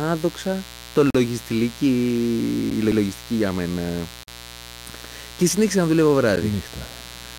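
A mains buzz runs under the speech for the whole clip, at roughly 20 dB below it. Sharp switching spikes on the 60 Hz supply, two per cycle, produce a dense stack of harmonics reaching into several kilohertz. The result is a raspy, edgy buzz rather than a smooth low hum, and its steady presence through pauses sets it apart from the brief events below.

A block of digital silence first cuts the speech from 1.10 to 1.15 s. For about 43 ms the output drops to silence and then returns with no fade, leaving a short hole. The length fits a 2048-sample buffer at 48 kHz that was not filled in time. A shorter dropout of about 11 ms at 2.70 s, which fits a 512-sample block, sounds more like a single tick.

At 2.92 s the first overlapping chunks appear. A new chunk begins about 100 ms before the previous one ended, so that stretch of speech plays twice and stutters. No sound disappears here. The audio repeats.

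Another 43 ms silent block follows from 4.23 to 4.28 s, and an 11 ms tick at 6.36 s.

The overlap returns at 7.12 s, exactly 4.2 s after the first one. The audio was handled in 2 s chunks.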